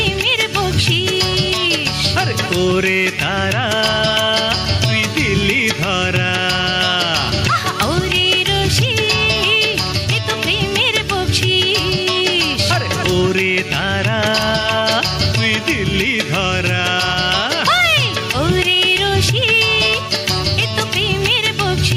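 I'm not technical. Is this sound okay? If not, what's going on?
No. From start to finish the audio has gain pumping. The loud and soft parts sit squashed together. This is likely the recording level being set far too high, with an automatic level control pulling it down on each loud moment.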